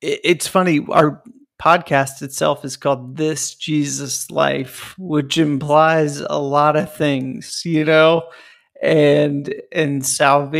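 At 3.12 s the speech suddenly slows to about 0.7 times its pace and stays there to the end, with its pitch unchanged. This is a time-stretched section, likely from software lengthening the audio to fill a set duration by repeating short slices. The slowed stretch drags. A plain playback slowdown would also drop the pitch, and the steady pitch here is what separates the two.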